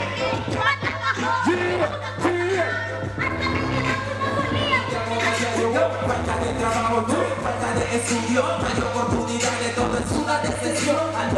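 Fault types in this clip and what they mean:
Mains hum (throughout): A steady low tone at 50 Hz sits under the whole clip, loud enough to stand only about 10 dB below the wanted sound, so it is plainly audible in every quiet gap. A ground loop or a nearby transformer has let the power-line frequency leak into the signal path, and because that coupling never lets up, the tone holds a constant pitch and level from start to finish.
Dropped samples (7.68 s): A single sharp click is heard at 7.68 s, a brief vertical streak across the spectrum with no audible gap around it. The likely cause is a tiny slice of the stream, a fraction of a millisecond, going missing, so the waveform jumps straight from one value to a later one. That sudden step in the waveform produces the click, while far too little is lost to remove any sound.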